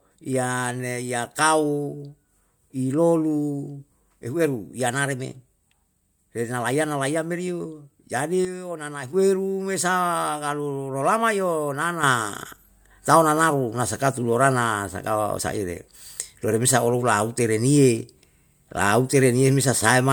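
Sudden gain jumps, likely digital gain steps applied without a ramp, drop speech and background noise together by about 8 dB from 8.45 to 9.13 s, then raise both by about 7 dB from 12.03 s to the end.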